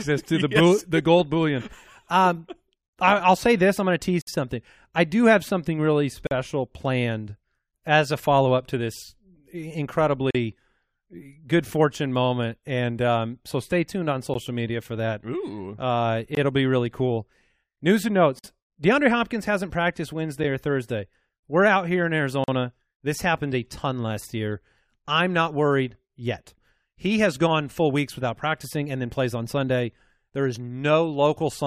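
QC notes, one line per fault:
4.22–4.27, 6.27–6.31, 10.31–10.35, 14.34, 16.35–16.37, 18.39–18.44 and 22.44–22.48 s, gap between stream segments: hard-edged dropouts from about 13 to 58 ms, landing on the 2-second segment boundaries, though not every boundary. The timestamps of neighbouring segments don't quite meet, so the player fills the hole with silence. Nothing is lost; the audio just stops dead and picks up again. That's why each one sounds like a brief hard-edged hole in the sound.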